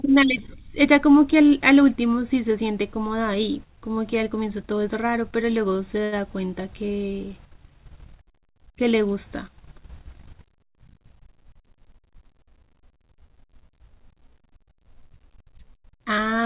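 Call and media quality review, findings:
Short stall from a late packet, 6.04–6.15 s: jitter buffer ran dry, receiver stretched the last sound about 76 ms, nothing lost, playout delay up 76 ms; held sound with a slight buzz or dip.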